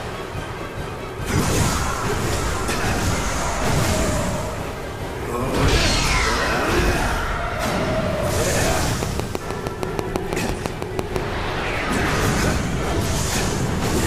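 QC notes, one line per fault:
9.03 to 11.17 s, train of clicks: a steady run of about fifteen near-identical pops, evenly spaced at 6.1 per second and sitting about 15 dB above the sound, so they tick right through the gaps too. Likely interference from nearby gear or a faulty connection or power supply.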